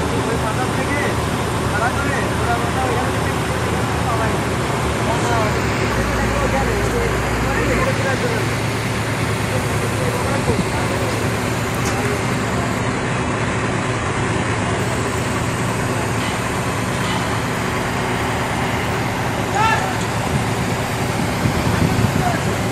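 An adaptive stream dropped to a lower bitrate from 12.80 to 14.80 s, switching mid-playback to a much leaner encoding, which fits a step down to a 12 kbit/s HE-AAC stream. For those two seconds the treble turns thin, nothing is heard above 11.4 kHz, and the quality changes abruptly, with no gap.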